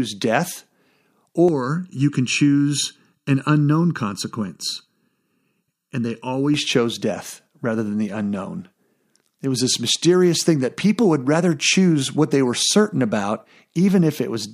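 From 1.49 to 6.54 s the speech turns hollow and phasey. This is channel delay (comb filtering). One channel lags the other by under a millisecond, and summing to mono cancels evenly spaced frequencies. The first notch sits near 700 Hz.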